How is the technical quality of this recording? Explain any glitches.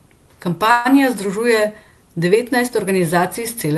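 Speech carried over a call path, with band-limiting near 12 kHz and one glitch. From 0.71 to 0.87 s a call audio freeze fills about 140 ms with fading buzz or hiss, likely a jitter-buffer underrun; speech then resumes late, nothing lost, showing as a smeared, decaying band on a spectrogram.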